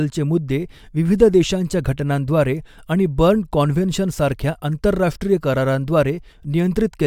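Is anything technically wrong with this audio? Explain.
No, nothing technically wrong can be heard in this speech recording. The audio carries through without any dropout, distortion or other defect.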